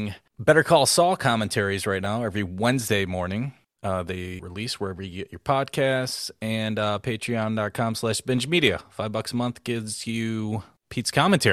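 At 2.04 to 2.06 s, just after "commentaries right", one 10 ms chunk of speech arrived a chunk late, so the chunks are out of order, leaving a brief jumbled blip.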